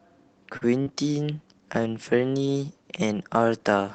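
Speech over an Opus call. First thing you'll hear is a short stall from a late packet around 0.57 to 0.71 s: the jitter buffer ran dry, so the last sound gets stretched by roughly 40 ms, with a slight buzz or dip, before carrying on with nothing lost. Right after, at 0.82 to 0.88 s, there's a short concealed packet loss where about 40 ms never arrived and the decoder papered over it, giving a quick smear or wobble. Then from 1.24 s to the end there's a call bitrate drop, sounding like the encoder was pushed from about 32 kbps down to around 13 kbps, probably after the bandwidth estimate fell. The speech turns rough and watery, and its top end, which tops out near 8 kHz before the drop, gets duller, worst for a stretch of about 1.2 s.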